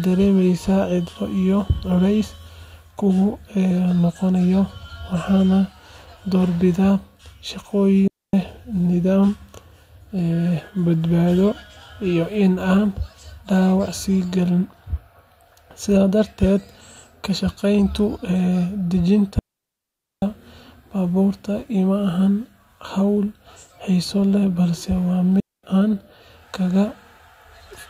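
At 8.08 s the speech drops into a clean hole of near silence for about 258 ms, again at 19.39 s for a longer 833 ms, and at 25.40 s for 236 ms just after "xiiso leh balse waa". These are digital wireless dropouts: the receiver lost too much data and muted with a very short fade. Unlike an analog wireless dropout, no burst of hiss or static comes before or after; the sound simply switches off and back on.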